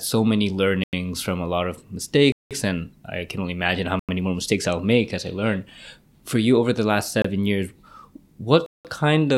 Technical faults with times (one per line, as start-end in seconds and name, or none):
0.84-0.93 block of digital silence
2.32-2.51 block of digital silence
3.99-4.09 block of digital silence
7.22-7.24 block of digital silence
8.66-8.85 block of digital silence